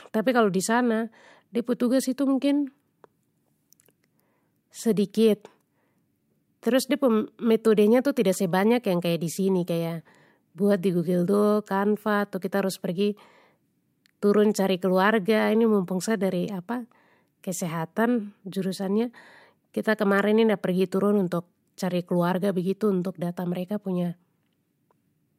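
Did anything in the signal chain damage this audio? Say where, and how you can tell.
No, nothing audible points to damage at any stage of the chain, from capture through conversion, transport and storage to playback.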